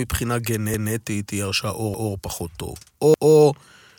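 At 0.74 s, 1.94 s and 3.14 s the speech stutters. Each time, a 200 ms stretch plays twice, ending at 0.94 s, 2.14 s and 3.34 s. This is overlapping chunks. The audio was handled in 1.0 s blocks, and each block began 200 ms before the previous one ended. The overlap was not removed, so that slice repeats at every join. The repeats come at a steady 1.2 s spacing. They sound like a short skip-back with a click.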